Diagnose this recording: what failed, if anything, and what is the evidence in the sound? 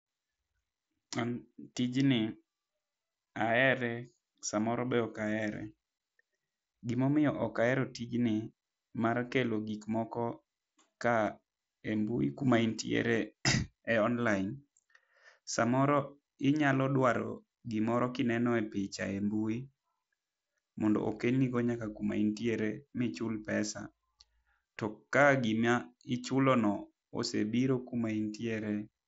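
Nothing here has failed: the speech comes through a wideband Bluetooth headset link, with the top end stopping around 7.7 kHz as you'd expect from mSBC.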